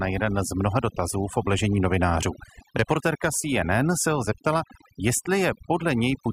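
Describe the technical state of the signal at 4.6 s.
At 4.6 s the pauses fall to near silence scattered with twinkling specks. That is overdone noise removal, present across the whole clip rather than just this moment. A noise reduction stage set far too aggressively is cutting individual frequency bands down or out whenever their level sits close to its noise estimate, so the quieter components of the voice are removed together with the background noise.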